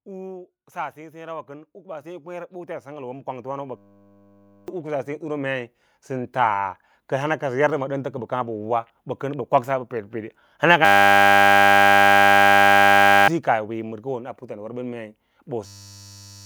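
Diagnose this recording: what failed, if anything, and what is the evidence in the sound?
From 0.72 to 5.51 s the speech and background swell together by about 19 dB. This is automatic gain rising: call processing's gain control slowly lifts a quiet input.

A 100 Hz buzz replaces the audio at 3.77–4.68 s, 10.85–13.28 s and from 15.66 s onward. This is a system hang loop: the hardware kept repeating one 10 ms buffer while the driver was frozen.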